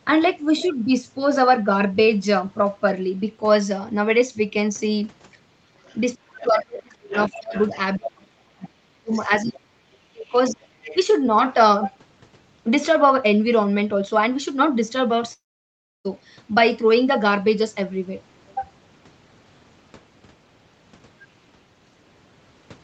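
From 5.78 to 6.0 s a faint second voice, about 35 dB below the talker, is the other side's voice leaking through. The likely cause is loudspeaker echo the canceller did not fully remove. It returns more strongly, about 15 dB down, from 7.13 to 8.09 s, then as a brief scrap at 8.62 s and again from 10.84 to 10.96 s, about 20 dB down.

Overlapping those leaks, from 6.19 to 7.54 s and again from 7.97 to 10.64 s, the talker's own level dips by as much as about 35 dB, for roughly three seconds in total. This is speech suppressed in double talk, likely the echo canceller turning everything down while both sides spoke. It differs from a network loss because the talker thins and ducks in pieces instead of vanishing outright.

From 15.33 to 16.07 s comes a long network dropout, likely lost packets. About 0.72 s never arrives. A short fading continuation gives way to roughly 0.67 s of near silence, and the audio resumes without the missing part rather than catching up. 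That makes it unlike a brief concealed glitch. Through the call path the top end stops at 8 kHz.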